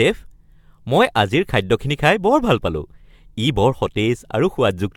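From start to finish the speech sounds swirly and hollow, with smeared attacks and nothing above 17.6 kHz. This generation loss likely comes from repeated AAC-LC re-encoding, around seven passes, each shifting the frame grid and deepening noise and spectral holes beyond what a 96 kbit/s-like rate explains.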